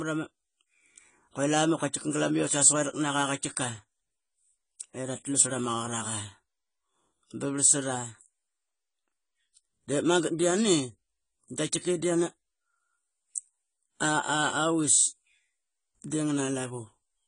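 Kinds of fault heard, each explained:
AAC compression: the speech sounds dull and smeared, with nothing above 10 kHz and a warbly, fizzy edge, likely from AAC-LC coding at a low bitrate around 24 kbps.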